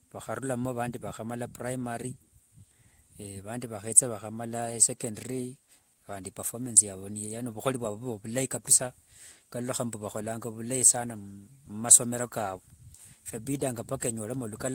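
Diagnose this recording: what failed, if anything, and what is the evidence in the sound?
Nothing failed in this recording, and the sound carries no evidence of a fault at any stage.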